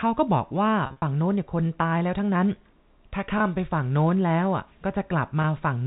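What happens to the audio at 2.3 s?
Nothing goes wrong at 2.3 s: the speech carries on intact through that moment, still with the narrow, telephone-band sound of its G.711 coding.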